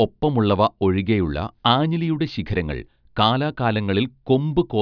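Nothing in the recording stood out as a technical problem on listening.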